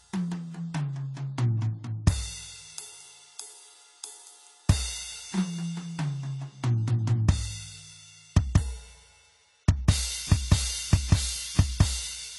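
A music clip, and it's dull all the way through: there's nothing above about 11.5 kHz, and the codec damage is plainly audible from start to finish. That's most likely AAC compression, specifically AAC-LC squeezed hard enough that it fits a low bitrate around 32 kbps. At that rate the encoder can't afford the top octave, so it drops the cut-off and spends its limited bits on what the hearing model rates as most important, which leaves the whole track sounding muffled and compressed.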